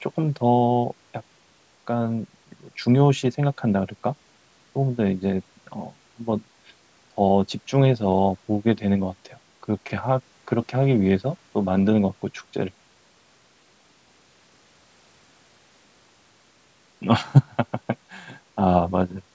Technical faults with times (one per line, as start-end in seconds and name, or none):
none